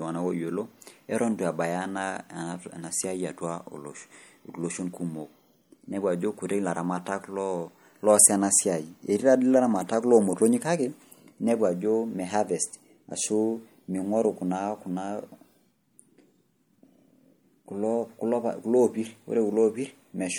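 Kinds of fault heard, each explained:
MP3 compression: plainly watery, swirly speech throughout, likely from a low bitrate near 64 kbps; unlike simple filtering, faint detail flickers on and off between frames.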